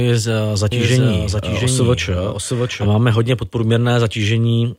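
Speech, with a doubled audio track running from 0.72 s to 2.86 s, ending just before "máme hodně". A second full-band copy of the speech trails the original by roughly 0.7 s at around 5 dB lower, with no decay or room colouring, and it cuts in and out abruptly at both boundaries. The likely cause is the signal being captured a second time through a slower path, or an edit that left two offset copies in the mix.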